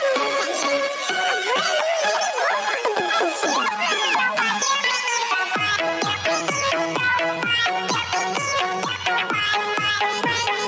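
Gain pumping runs through the whole clip. The gain swings by roughly 5 dB. The likely cause is input gain set far too high, with a fast limiter clamping each peak.

At 3.00 to 3.02 s comes a single loud pop. It is a sharp click, roughly 10 dB above the surrounding sound, which carries on underneath. A likely cause is a voltage spike from a plug, switch, static or driver glitch. The call processing's normal band limit leaves nothing above 8 kHz.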